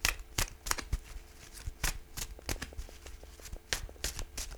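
From 2.39 s to 4.56 s, a train of clicks appears, likely from interference or a faulty connection or power supply injecting a pulse about 6.0 times per second. Roughly fifteen near-identical clicks tick at an even pace, peaking a few decibels above the sound, including through quieter moments.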